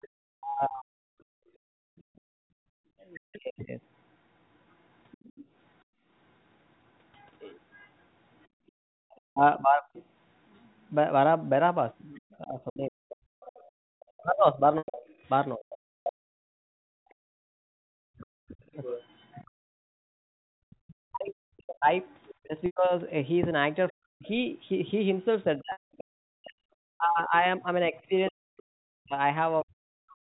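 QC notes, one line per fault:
0.01–26.04 s, other side's voice leaking through: a second voice sits roughly 20 dB under the main talker for most of the clip, likely far-end audio from the loudspeaker that the echo canceller left in the microphone signal.
0.34–3.71 s and 9.26–30.28 s, speech suppressed in double talk: the main voice dips by up to around 40 dB, for about a second in the first span and roughly seven seconds in the second. It likely happens where both sides overlap and the canceller turns its own talker down along with the echo.
1.25–8.98 s and 16.6–20.05 s, background gated by the echo canceller: room sound drops out by about 35 dB and about 40 dB respectively, for roughly 1.5 s and 0.7 s in total. The canceller clamps the microphone while the loudspeaker plays, then releases.
14.78 s, 22.66 s, 25.72 s, packet loss with pitch repetition: gaps of 100, 100 and 180 ms, consistent with runs of 20 ms packets. 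Each starts as a brief held, buzzy repeat of the last pitch period, fades to silence, and speech returns through a short cross-fade.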